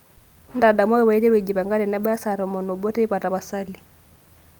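No technical faults can be heard anywhere in this speech recording; the signal stays continuous and steady throughout.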